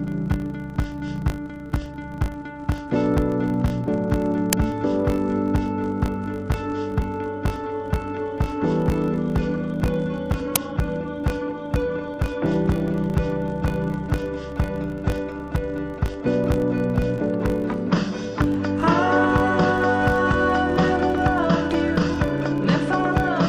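From start to finish, a filter loses its internal state at every block boundary and restarts each block from silence. Each block therefore opens with a small transient, and these repeat 50 times a second, producing a filter restarted on every block buzz that rises and falls with the level of the sound.

At 4.53 s, and again at 10.56 s, an uninitialised buffer was sent to the output before any audio had been written into it, so leftover memory played as samples. Each is a loud crack, about 3 ms and then about 6 ms long, consistent with 128-sample and 256-sample blocks.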